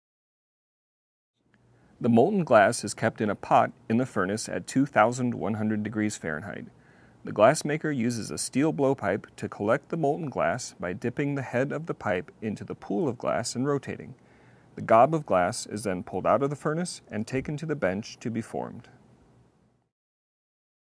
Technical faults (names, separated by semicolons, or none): none